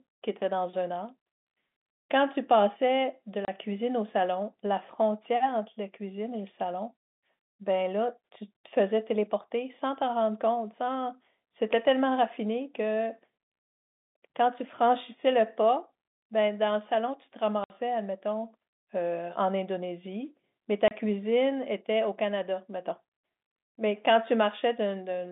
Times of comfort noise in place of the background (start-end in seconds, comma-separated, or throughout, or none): none